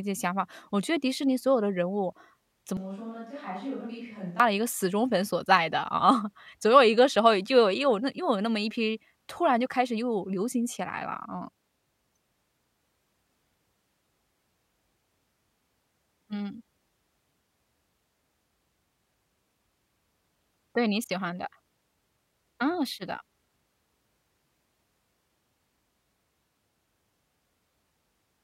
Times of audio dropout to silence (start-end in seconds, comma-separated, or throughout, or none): none